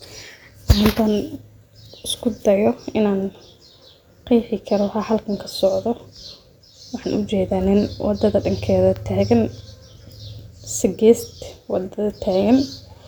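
Nothing goes wrong anywhere in this bit of speech, so there's no technical fault to point out.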